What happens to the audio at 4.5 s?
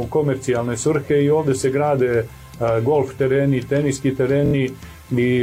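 At 4.5 s there is a Bluetooth stutter from 4.46 to 4.55 s. A short slice of the last received audio repeats in a rapid buzzing run, roughly three late or lost packets' worth, about 70 ms. The sound then picks up further on, skipping ahead rather than resuming where it stopped, which separates it from a buffer underrun.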